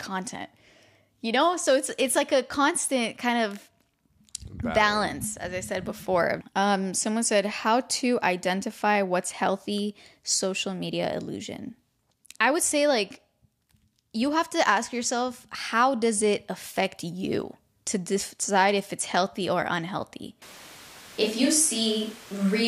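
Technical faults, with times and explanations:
20.42 s to the end (22.68 s), switch to a distant microphone. The speech suddenly turns roomy and hollow, and the low end thins out. The loudness stays about the same. Room noise rises to roughly 25 dB below the speech. The close microphone's signal has likely dropped out, leaving a microphone farther from the talker. That one picks up more room reflections and ambient noise. The change is abrupt and never switches back.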